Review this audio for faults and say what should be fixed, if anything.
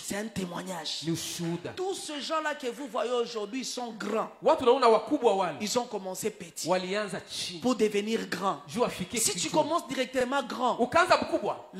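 Nothing here needs fixing, as no faults turn up anywhere in the recording. There is nothing to correct or prevent.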